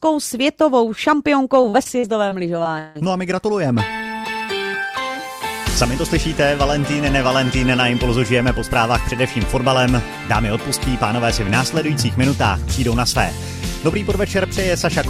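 From 1.61 to 2.97 s the audio turns choppy and robotic, the mark of repeated packet loss: seven gaps land in quick succession, the longest about 160 ms. About 315 ms is patched by stretching the preceding sound, and about 320 ms simply drops out. Unlike a single dropout or steady clipping distortion, it stutters in bursts, with sound repeating and then vanishing across the whole stretch.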